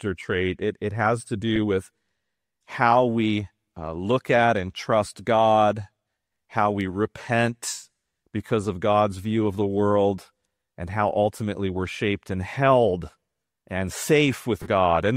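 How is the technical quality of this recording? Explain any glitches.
There are two short dropouts, both from lost LE Audio frames, under light lossy compression.

At 1.56 s there's a tiny blip that fits a single 7.5 ms frame going missing. At 14.62 to 14.68 s a longer gap of about 37.5 ms, enough for five frames, turns tonal content into a hissy smear that sags in level. The LC3 decoder patches each hole by repeating the last spectrum with scrambled phases, and after a few frames it starts fading that patch down.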